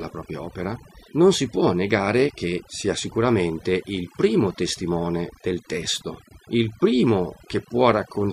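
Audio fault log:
Throughout, overdone noise removal: the denoiser cut bands near its noise estimate too hard, leaving a lowered background broken into twinkling specks and taking quiet parts of the voice with it.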